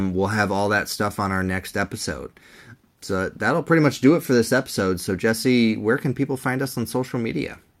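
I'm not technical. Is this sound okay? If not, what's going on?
Yes, this sound is okay, and there's nothing going on here that needs fixing.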